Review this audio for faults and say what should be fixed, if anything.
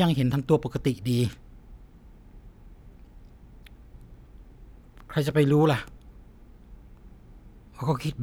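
No faults; nothing to fix.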